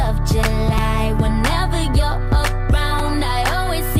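At 0.78 s and again at 2.99 s, a repeated buffer: fresh audio arrived late, so one slice of about 5.3 ms, which fits a 256-sample buffer, played three times in a row. Each event is a brief buzzy click. The waveform shows an identical repeating segment with step discontinuities, and the spectrogram shows thin vertical streaks.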